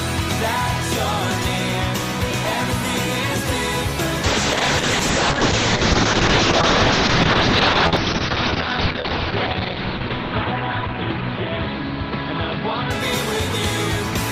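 At 4.25 s a call bitrate drop sets in and lasts until 13.97 s. The encoder was starved of bits and the sound turns rough, watery and muffled as coding becomes coarse, which fits a fall from about 32 kbps to roughly 6 kbps. The top end narrows from 20 kHz to 6 kHz, and the worst stretch holds for about 5.1 s. On a spectrogram, energy above 6 kHz vanishes, leaving a flat ceiling, with smeared, blocky texture below.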